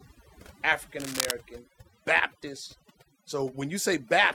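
Overdone noise removal runs through the whole clip. The noise reduction was pushed so hard that individual frequency bins near the noise estimate get cut to nothing, and the quieter parts of the speech are cut with them. The background sinks to near silence, broken by twinkling specks. On a spectrogram the gaps between syllables are almost black, scattered with isolated bright dots, and the speech energy looks ragged and patchy at its edges.

From 1.0 to 1.31 s a burst of cable scratch noise sits over the speech, roughly 5 dB below it. It sounds like a brief scratching or rustling. The likely cause is a worn cable, connector or control being moved, so that its contact resistance jumps about rapidly. The waveform shows dense, irregular spiky activity across that stretch, and the spectrogram shows an uneven broadband smear laid over the speech for about a third of a second.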